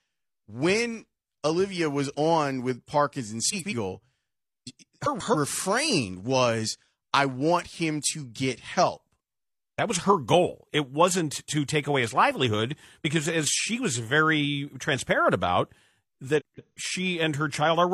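Speech with frames out of order at 3.50–3.73, 5.04–5.36 and 16.39–16.78 s. Swapped neighbouring blocks give a garbled flutter. Unlike a dropout or skip, no time is lost.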